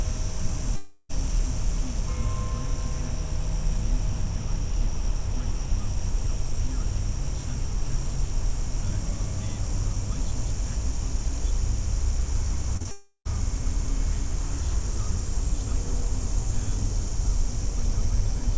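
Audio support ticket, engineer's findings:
Long network dropout, likely cause for both gaps. At 0.76–1.11 s, about 0.34 s of packets never arrived. The jitter buffer extended the last sound as a fading buzz/hiss across the whole gap, with no silence. At 12.91–13.27 s the same thing happened, and the fill decayed into roughly 70 ms of silence before the audio resumed with the lost section gone.

Short concealed packet loss at 12.77–12.82 s and 12.82–12.87 s. Consecutive small losses reached the decoder too late and were bridged by extrapolating the preceding sound, then cross-faded back. The result is a brief smear or wobble just ahead of the second dropout, with the G.722 path at 64 kbps band-limiting everything to 8 kHz.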